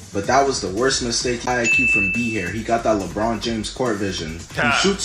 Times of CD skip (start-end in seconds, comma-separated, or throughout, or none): 1.46